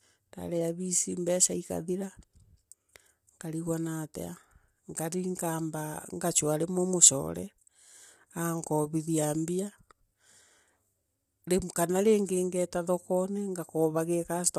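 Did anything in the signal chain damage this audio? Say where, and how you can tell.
Yes, at the codec stage, throughout the clip. The speech sounds rough and grainy, with noise filling the gaps between harmonics and nothing above 15.6 kHz. This is likely low-delay AAC compression. Its short frames blur pitch harmonics, and the damage fits a bitrate around 32 kbps.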